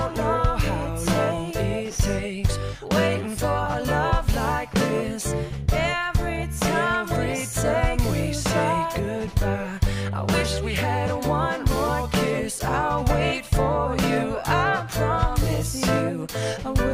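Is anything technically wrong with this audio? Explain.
No, nothing is technically wrong with this audio.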